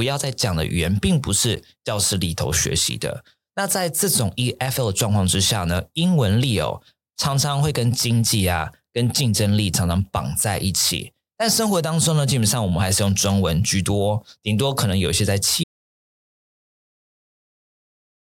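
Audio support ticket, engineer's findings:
Block of digital silence at 1.56 s: sharp tick where the signal drops to silence for about 12 ms, which fits one unfilled 512-sample output buffer. Sound resumes at once, unlike a dropout.

Audio dropout to silence from 15.64 s to end of clip: speech cuts mid-flow to silence with no room tone and never returns. Likely input lost, through a device or link failure or a mute, with the encoder still writing silence. Unlike a buffer block, this is a multi-second silence that never recovers.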